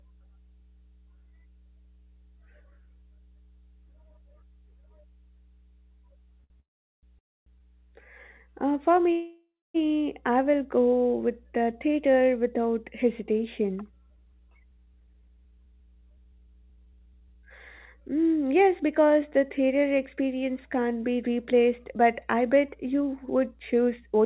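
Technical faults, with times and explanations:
Throughout: mains hum. A steady low tone at 60 Hz, about 30 dB below the speech, runs under the whole clip. It is the kind of hum a ground loop or nearby transformer couples in from the power line, and it stays constant whatever the speech is doing.
6.44 s to 6.52 s: short stall from a late packet. The sound at this point is held about 60 ms too long before the speech carries on from where it paused. A packet arrived late, the receiver stretched the last sound to cover the wait, and nothing is lost.
6.60 s to 7.05 s, 7.19 s to 7.60 s and 9.12 s to 9.76 s: call audio freeze. The speech stops and the last sound continues, fading, then goes quiet. The quiet lasts about 390 ms in the first freeze, 270 ms in the second and 240 ms in the third, and the held stretches run about 430, 280 and 630 ms. The speech resumes exactly where it left off, so gaps have been inserted but no speech is missing. 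This is likely packets held up in transit that drained the jitter buffer.
14.1 s to 18.0 s and 21.91 s to 24.20 s: jitter buffer speed-up. The speech runs noticeably hurried at an unchanged pitch, at 116% and then 111% of normal speed, which removes roughly 0.7 s and 0.3 s of audio. After the earlier delays the receiver trimmed many short pitch-period pieces to bring its backlog down.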